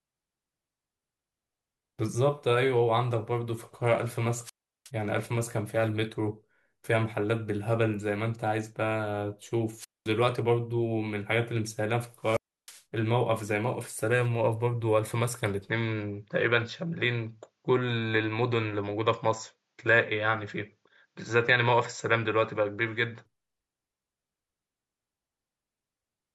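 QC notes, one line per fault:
4.43–4.90 s, 9.77–10.11 s, 12.22–12.82 s: wireless microphone squelch dropout. The radio link fades, hiss swells, then the receiver mutes the speech for about 0.36, 0.22 and 0.31 s respectively.
15.69–23.26 s: input switched to a poorer device. The speech abruptly loses everything above 7.6 kHz and sounds duller, likely a different microphone, with no gap, little level change and faint added noise.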